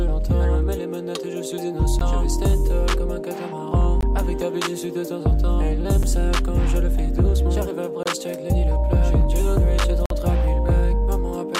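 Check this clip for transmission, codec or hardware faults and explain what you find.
The clip has one fault type: a gap between stream segments, occurring five times. Short silent holes with hard edges fall at 1.99 s, 4.01 s, 6.03 s, 8.03–8.06 s and 10.06–10.10 s. They recur every 2 s, which fits 2-second segments. Each time, adjacent segments' timestamps don't quite meet, and the player fills the shortfall with silence. The holes run from about 5 ms to 48 ms. The longest is near 10.1 s. No audio is lost.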